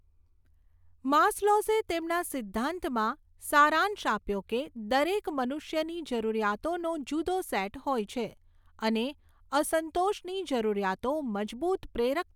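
No technical faults can be heard anywhere in the speech recording; the signal stays continuous and stable throughout.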